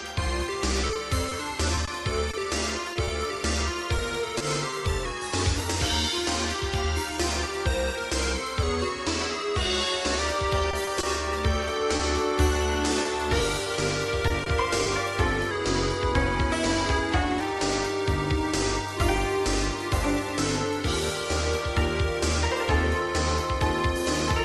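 From 0.87 to 4.74 s, scattered short gaps appear: around ten packets go missing or arrive late, each hole no longer than about 20 ms, and the receiver patches them by extending the preceding sound, so roughly a twentieth of that stretch is filled in. The audio stays clear but picks up small ticks and brief smears. The same pattern returns from 10.71 to 14.88 s.

Three times a drift correction step is likely at work, with clock-matching software abruptly changing the playback rate to rebalance its buffer. From 5.05 to 5.57 s, 8.63 to 10.19 s and 15.51 to 17.41 s, playback runs 6.25% slower and drops 112 cents, a little over a semitone. Each span sounds suddenly detuned and sluggish, audible through the Opus call path's roughly 12 kHz bandwidth.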